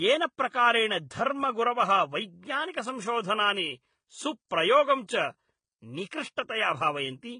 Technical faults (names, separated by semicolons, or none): transcoding between lossy codecs